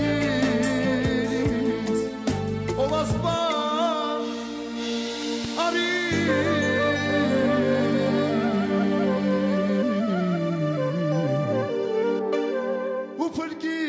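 Nothing's wrong with this one: the sound has simply gone through a call's microphone processing, so the lowest bass is trimmed away and nothing reaches above 8 kHz, which is just how that path shapes audio.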